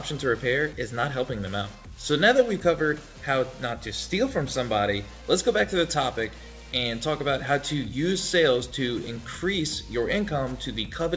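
Nothing goes wrong anywhere in this one; it's just audio that has come over a call link, with the top of the band stopping at about 8 kHz, which fits a wideband call codec like G.722 running at 64 kbps.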